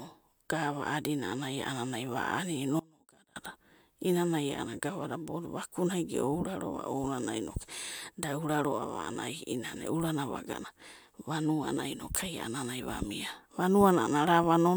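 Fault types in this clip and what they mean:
Audio dropout to a faint residue: the speech cuts out abruptly at 2.80 s and returns at 3.36 s, a gap of about 560 ms. The signal does not fall to silence. A faint sound remains underneath, roughly 25 dB below the normal speech level. The likely cause is a brief loss of the wanted feed while the downstream path stayed live and kept passing that residue, so the gap has hard edges rather than the shape of a pause or fade.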